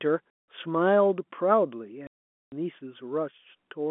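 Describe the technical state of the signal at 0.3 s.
At 0.30 to 0.36 s there is packet loss filled with silence: missing packets were replaced by a hard-edged gap of silence.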